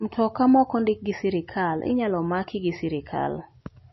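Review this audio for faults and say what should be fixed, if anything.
Throughout the speech, likely MP3 compression at a starved bitrate, one that fits roughly 26 kbps, has forced the encoder to discard everything above 5.8 kHz and to drop weak frequency lines frame by frame. The result is dull, plainly audible watery swirl with smeared onsets. Encode from the original source at a much higher bitrate, or keep a lossless copy, to prevent it.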